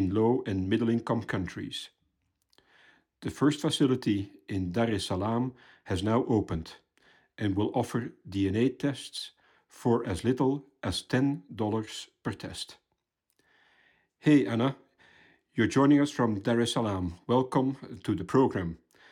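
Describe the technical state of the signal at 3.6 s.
At 3.6 s the speech signal is intact, with no audible fault at that point.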